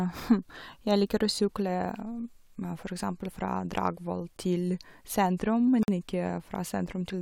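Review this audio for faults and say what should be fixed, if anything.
From 5.83 to 5.88 s, a gap between stream segments leaves 50 ms of hard-edged silence, a blank vertical stripe on a spectrogram, because segment timestamps don't meet. Fix the segmenter so each segment's start timestamp equals the previous segment's end.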